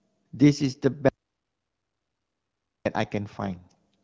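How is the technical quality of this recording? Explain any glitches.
Two faults affect this speech recording: a long gap of total silence and a brief stretch of degraded coding near the end. The audio carries the light, band-limited character of AMR wideband (HD Voice) coding throughout, consistent with 12.65 kbit/s.

From 1.09 s to 2.85 s there is an audio dropout to silence lasting about 1.77 s. The speech cuts off abruptly and returns just as abruptly. The gap is silent with no room tone at all, so whatever was spoken in that interval is gone. That signature points to the input signal being lost while the recorder or encoder kept writing empty samples, likely from a momentary disconnect, a failed link or an accidental mute.

From 3.44 s to 3.74 s there is an AMR rate drop. For about 0.3 s the speech turns rougher and more synthetic, while the audio bandwidth stays the same and there is no break in the signal. 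The change fits the codec stepping down from 12.65 to 8.85 kbit/s, as happens when a weak radio link prompts the network to trade coding bits for error protection. The original quality returns once the rate goes back up.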